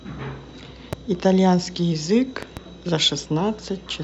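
A sudden voltage step or pulse, likely from a plug, switch, static discharge or driver glitch, is added to the signal twice, and the circuits downstream shape it into a loud pop. The first is a single sharp pop from 0.93 to 0.95 s. The second, from 2.43 to 2.59 s, is a quick pair of pops. Both peak around 10 dB above the speech, which carries on underneath each one.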